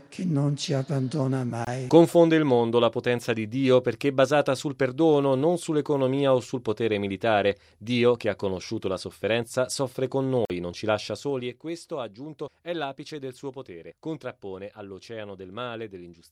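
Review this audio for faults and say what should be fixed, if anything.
Brief silent gaps cut into the sound at 1.65–1.67 s (23 ms, consistent with one lost packet) and 10.45–10.50 s (46 ms, about two packets). Playback then resumes further on. These are likely Bluetooth dropouts, where packets reach the headphones too late and are discarded. A stronger link, less radio interference or a larger receive buffer would prevent them.

From 11.05 to 11.61 s a fast ticking rides on the sound as the level falls about 10 dB. This is zipper noise: the gain drops in 2 dB jumps, roughly ten per second, with no smoothing between them. Interpolating the gain per sample instead of stepping it would remove the ticking.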